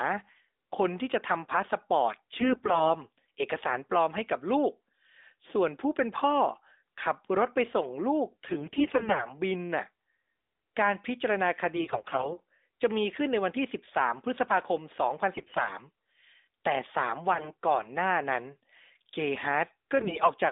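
AMR bit errors hit the speech at 2.40 to 2.93 s, 8.46 to 9.30 s, 11.76 to 12.39 s, 15.34 to 15.71 s, 17.34 to 17.55 s and 19.96 to 20.34 s. In each stretch the voice turns hoarse, scratchy and gargly, with the worst roughness around 15.3 s and the mildest near 20 s. Flipped bits in the weakly protected parts of the narrowband mobile frames misplace the excitation pulses and skew the fine pitch, gain and spectral values. Unlike frame loss, the sound never drops out or freezes, and pitch and level roughly hold.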